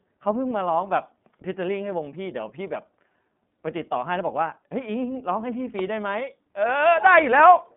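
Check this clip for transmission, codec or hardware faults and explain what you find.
One fault runs through the whole speech clip: iLBC codec coding. It holds from start to finish. The band sits between roughly 150 Hz and 3.6 kHz, and nothing passes above 3.7 kHz. The codec codes each 30 ms frame's excitation on its own, without drawing on the frame before. That framing fits its 13.33 kbps mode. The damage is plainly audible. The speech sounds clear but a little rough, with a synthetic edge.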